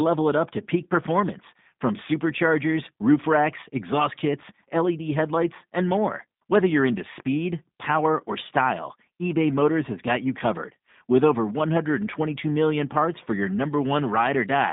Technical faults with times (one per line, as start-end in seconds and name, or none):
0.00-14.73 G.729 codec